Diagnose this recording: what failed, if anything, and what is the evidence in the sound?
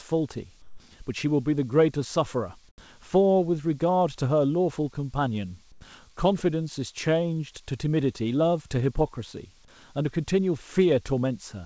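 The call-processing stage shows comfort noise in place of the background. At 0.62 to 0.80 s, 2.69 to 2.78 s and 5.72 to 5.81 s, the real room noise between bits of speech becomes a flat, featureless hiss. Each patch is quieter, by about 7, 9 and 6 dB. The genuine background sits about 34 dB below the loud parts. The likely cause is discontinuous transmission. The sender goes silent in pauses and the receiver synthesises noise. The G.722 path carries nothing above 8 kHz.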